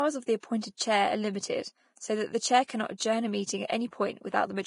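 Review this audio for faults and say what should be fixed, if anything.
The whole clip sounds hissy and grainy, with nothing above 10.6 kHz. This is heavy Vorbis compression damage, likely from a low bitrate near 32 kbps. Coarse treble quantisation turns detail into noise.

Just after "of the", from 0.40 to 0.43 s, a short hiss leads an attack. This is pre-echo. Quantisation noise from the block spreads 29 ms ahead of the onset.

Re-encode from the original at a higher bitrate, with block switching enabled, to prevent both faults.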